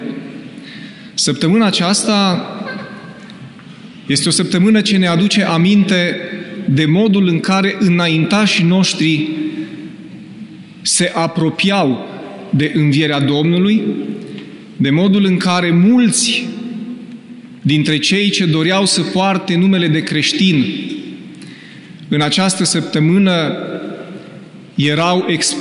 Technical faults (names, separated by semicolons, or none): none